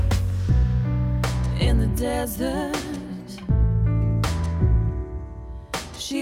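No technical fault can be heard anywhere in this audio. Nothing in the sound points to a problem with how it was captured, processed or delivered.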